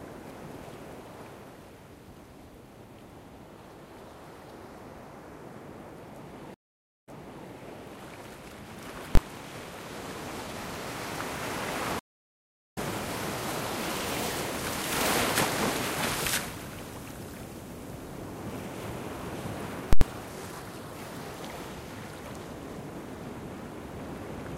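A stream reconnect at 6.54 s drops the audio into about half a second of silence. A fresh decoder then picks up 0.46 s earlier than where playback stopped, so a short stretch repeats and enters muted or fading in.

Invalid numbers at full scale at 9.15 s: a calculation produced invalid values that were pinned to one extreme value for a 21 ms block, which fits 1024 samples. It comes through as a single loud bang.

A second stream reconnect, from 11.99 to 12.78 s, silences the audio for about 0.73 s. Playback resumes roughly 0.7 s later than where it broke off, so that stretch is skipped.

Invalid numbers at full scale again from 19.93 to 20.01 s, an 85 ms block consistent with 4096 samples. The output is stuck at one extreme value, far beyond the audio's peaks, heard as a very loud pop at each end with nothing between them.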